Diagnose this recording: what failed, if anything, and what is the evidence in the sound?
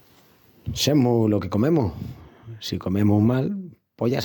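Nothing failed; no fault is audible anywhere in this recording.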